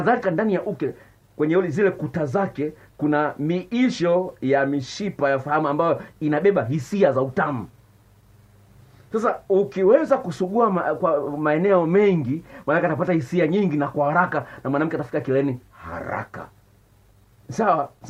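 Nothing technically wrong can be heard in this audio. No fault turns up at any point in the clip.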